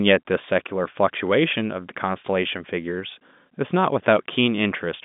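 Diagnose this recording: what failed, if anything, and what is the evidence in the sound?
Nothing failed in this recording.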